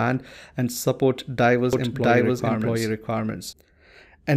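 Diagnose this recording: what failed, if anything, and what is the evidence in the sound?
A doubled audio track runs from 1.73 to 3.53 s, just after "and support diverse": a full-band copy at about equal level trails by roughly 0.7 s, with no decay or room colour, starting and stopping abruptly. The likely cause is a second, slower capture path or an edit holding two copies. The spectrogram shows each pattern repeated 0.7 s later, and the waveform shows abrupt edges.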